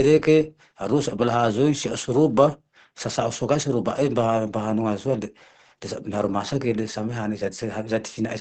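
Throughout, the speech is muffled and hoarse with nothing above 8.7 kHz, likely Opus compression in its SILK speech mode, consistent with about 16 kbps.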